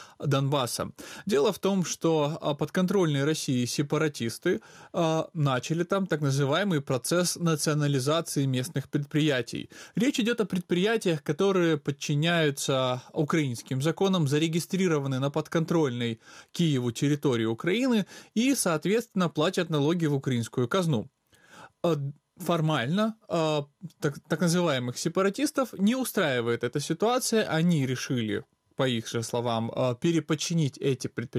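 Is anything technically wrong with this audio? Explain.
No, nothing in the recording points to a technical fault.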